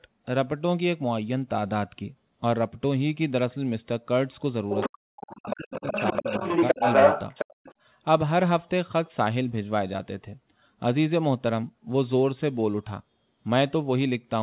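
Around 4.7 to 4.9 s there's the other side's voice leaking through, sitting only about 5 dB under the talker, likely a loudspeaker echo the canceller didn't fully catch. It comes back at 5.16 to 5.54 s, about 10 dB down, and then from 5.74 to 7.74 s it's actually about 5 dB louder than the talker.

In between, the speech is suppressed in double talk, likely the canceller ducking everything when both ends talk at once. The talker drops out by about 40 dB at 4.95 to 5.1 s and about 35 dB across 5.38 to 5.95 s, then dips by about 10 dB at 6.12 to 6.43 s and 6.74 to 6.85 s.

At 7.54 to 7.58 s the background is gated by the echo canceller, with the room sound dropping about 40 dB for a moment before springing back.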